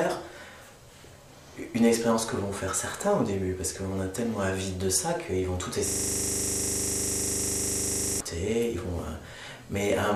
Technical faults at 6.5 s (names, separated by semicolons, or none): system hang loop